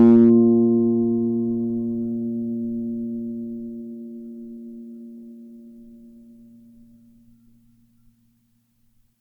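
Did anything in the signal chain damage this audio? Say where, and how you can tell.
Yes. Hard clipping damages the music from 0.00 to 0.31 s, at the very start. The peaks are driven about 3 dB past full scale at a converter or gain stage and cut flat. The flat tops add high harmonics, heard as crackle on the loud peaks.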